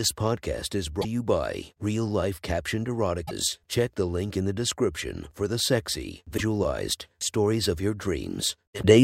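At 0.98 to 1.05 s, between "podcast is" and "you by", a short glitch cuts through the speech. This is damaged data in a compressed stream. Some bytes in the encoded file are wrong. The decoder misreads those frames, loses sync and hunts for the next valid header. The same blip returns at 3.23 to 3.31 s and at 6.34 to 6.41 s, just after "description for the sexy", then at 8.79 to 8.85 s. Each lasts under a tenth of a second.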